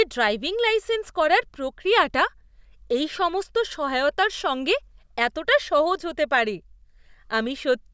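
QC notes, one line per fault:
No fault found.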